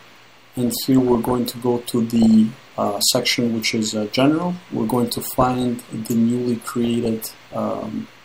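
DAB burbling at 0.49–1.35, 2.16–2.34, 4.73–5.65 and 6.62–7.53 s. Bit errors of under one percent corrupt MP2 sub-band levels, giving short noise blips and level jumps in single sub-bands rather than clean dropouts.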